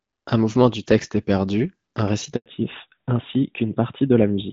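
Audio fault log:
2.36 to 2.46 s, handover gap: the sound cuts out for about 100 ms, fading within a few tens of milliseconds and then going dead. That's the call hopping between networks with no frames getting through, so whatever fell in that slot is simply gone.
2.46 s to the end, fallback to narrowband: after the gap everything above 4 kHz disappears and the sound turns duller and rougher. The call has dropped from HD Voice, whose light coding before this fits AMR-WB at 12.65 kbit/s, to narrowband AMR, likely at 12.2 kbit/s.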